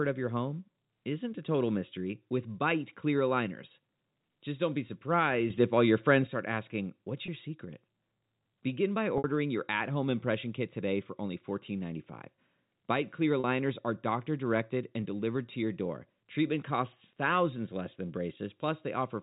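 From 5.5 s to 6.27 s the speech and its background noise leap up together by about 7 dB and drop back, with no ramp in or out. This is a sudden gain jump, likely a digital gain step applied between one sample and the next.

At 7.26 s a 20 ms gap is filled by a briefly held, slightly buzzy tone. At 9.18 s a 60 ms gap and at 13.4 s a 40 ms gap stretch further, fading toward silence before the speech cross-fades back in. This is packet loss with pitch repetition: the receiver covers missing audio by replaying the last pitch period. The gap lengths fit one, three and two lost packets, all within the narrow telephone band of the G.711 A-law coding.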